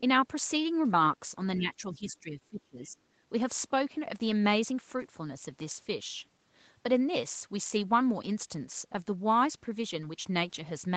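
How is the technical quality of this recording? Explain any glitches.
The recording has one clear glitch, early in the clip. Its sound stops at 8 kHz, which fits a call codec such as Opus at a modest bitrate. That band limit is expected on a call, not a fault.

From 1.59 to 2.98 s the speech keeps sinking, at worst by about 20 dB, for roughly a second in all. This is likely speech suppressed in double talk. The echo canceller mistook the talker for loudspeaker echo and turned the voice down.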